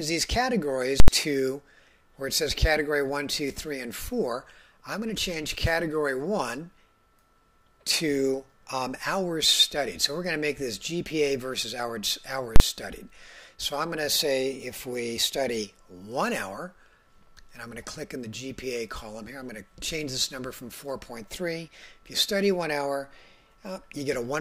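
The audio has two blocks of invalid numbers at full scale. The first runs from 1.00 to 1.08 s, lasting 80 ms. The second runs from 12.56 to 12.60 s, lasting 40 ms. In each, a calculation yields infinite or invalid values. These are replaced by the largest value the format allows. The output then sits flat at one extreme, far beyond the audio's own peaks. Each block comes across as a very loud pop or bang that cuts out the sound.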